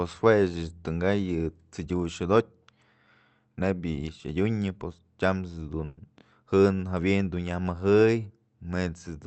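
At 5.85 to 5.99 s, just after "pos tyams", a burst of packet loss drops 120 ms of speech. The receiver fills it by extending the last sound as it fades, then jumps ahead. A spectrogram shows a smeared, dimming spectrum and an abrupt resumption, beneath the call path's 8 kHz ceiling.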